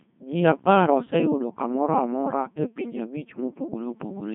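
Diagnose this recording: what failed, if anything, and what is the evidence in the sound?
The codec stage failed. The speech is a Codec 2 vocoder throughout: robotic, buzzy, with nothing above 3.8 kHz. It is resynthesised from pitch and envelope, which fits a 2.4 kbit/s mode. Unlike lossy-transform swirl, the waveform itself is gone, not smeared.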